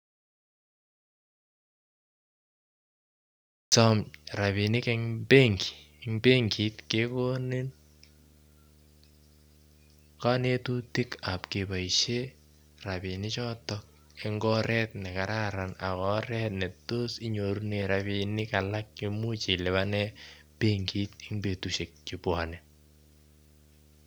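The audio input was likely lost, through a disconnected device, a failed link or a stray mute, while the recorder kept writing silence. This audio dropout to silence is already under way when the clip begins and runs until 3.72 s. For that stretch there is nothing at all, not even room tone, and the speech then starts abruptly mid-flow. Whatever was said during the gap is gone.

Throughout the clip, a screen or video cable is coupling into the audio path, producing video or display buzz. The interference repeats at the picture's field rate of 75 Hz, so a steady low buzz sits under the speech with a layer of harsh hash above it. It stays roughly 30 dB below the speech, and it persists from the moment sound returns to the end.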